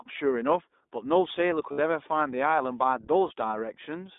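Speech, passed throughout through the iLBC codec: the line band runs only from about 250 Hz to 3.7 kHz, and the voice has a plainly rough, synthetic edge, which fits the 15.2 kbps, 20 ms frame mode rather than a simple low-pass filter, since the texture changes along with the loss of treble. From 1.37 to 2.87 s the quieter parts turn gritty with distortion that tracks the voice and sits around 40 dB below it, likely from truncation to about 9 bits without dither. Unlike steady hiss, this grain comes and goes with the signal. Lost iLBC frames appear at 1.72 to 1.80 s (60 ms) and at 3.28 to 3.32 s (20 ms), where the voice briefly freezes into a held, buzzy vowel as the decoder repeats the last pitch cycle. The longer gap is heard as a held tone rather than a dropout to silence, and the voice recovers almost immediately because each frame decodes independently.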